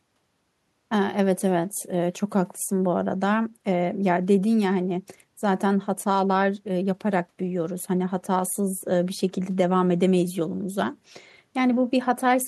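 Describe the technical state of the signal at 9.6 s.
At 9.6 s the speech signal is intact, with no audible fault at that moment.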